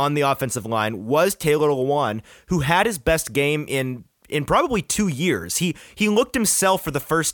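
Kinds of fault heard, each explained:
Nothing stood out on listening to this speech recording.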